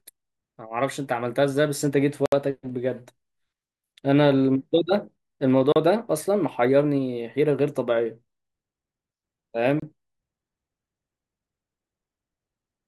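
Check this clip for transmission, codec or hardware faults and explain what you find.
The speech drops out completely three times, at 2.26 to 2.32 s (about 66 ms), 5.72 to 5.76 s (36 ms) and 9.80 to 9.82 s (27 ms). Each time it falls to dead silence and then resumes abruptly. This pattern is most likely a Bluetooth stall. Radio interference delays packets on the link, the headphones' small playback buffer empties before replacements arrive, and output pauses until the retransmitted audio catches up.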